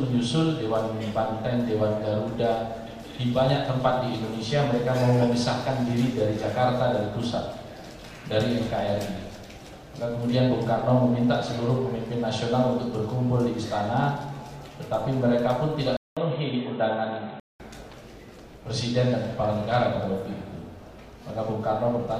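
At 15.97 s the audio cuts out for 200 ms, then returns dull and boxy with nothing above 4.1 kHz and a new background hiss roughly 35 dB down. Loudness stays about the same. At 17.6 s the full band comes back. This is likely an input switched to a poorer device. The gap at the switch and the fresh noise floor with its own colouring set it apart from a plain filter or codec bandwidth drop.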